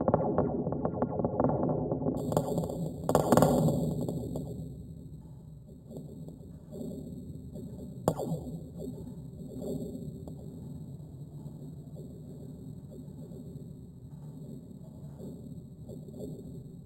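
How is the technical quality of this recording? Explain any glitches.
There's one real problem here. From 2.17 s onward there's imaging from sample-and-hold upsampling: 8 kHz audio was raised to 48 kHz by repeating samples, so mirrored copies from 4 to 8 kHz add a metallic fizz about 20 dB down.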